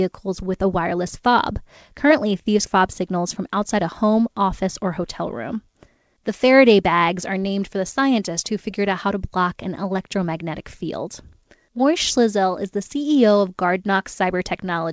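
At 2.66 s a skip ahead drops about 0.7 s of speech while later audio is already queued, so playback jumps forward with the two sides joined almost seamlessly. From 2.76 to 5.21 s a jitter buffer speed-up trims short pitch-period pieces, about a tenth of a second in total, making the speech run 4% faster at unchanged pitch.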